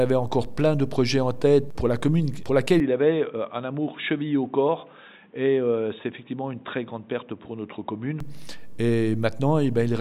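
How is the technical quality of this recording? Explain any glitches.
The recording has one glitch, from 2.8 s to 8.20 s: the sound turns dull and boxy, with nothing above 3.8 kHz, a few decibels quieter and carrying a new background noise around 40 dB below the signal. It then clears up again. The likely cause is the input switched to a poorer device, a narrower-band microphone with its own level and noise floor, with no gap at either switch. A simple filter or equaliser change would narrow the band but would not bring in a different noise floor.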